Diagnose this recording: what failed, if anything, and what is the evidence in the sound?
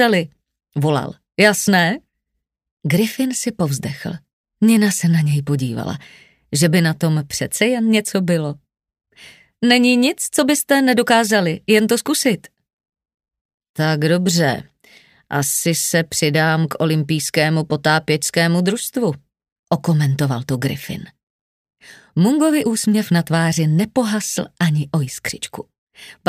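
Time-compressed catch-up, from 21.63 to 22.95 s, at the playback stage. Across those 1.32 seconds the audio runs about 1.15 times faster while its pitch stays where it was. That points to a player recovering from a stall: to drain the backlog it snips out short segments and cross-fades the joins, so time shrinks without resampling.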